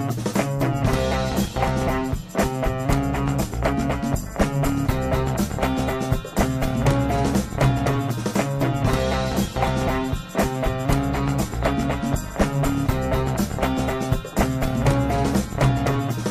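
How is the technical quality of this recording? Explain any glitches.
Nothing here stands out as a glitch, since the recording runs along without any dropouts, clicks or other technical hiccups to point to.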